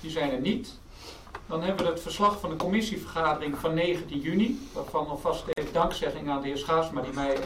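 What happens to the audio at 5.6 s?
At 5.53 s the sound drops out for about 45 ms, until 5.58 s, then resumes exactly where it left off: a gap at a join of encoded pieces. Two separately encoded segments were butted together untrimmed, so one's padded final frame and the next's start-up delay of silence both remain. On a waveform it's a flat notch with slightly softened edges; a spectrogram shows a clean vertical blank band across all frequencies.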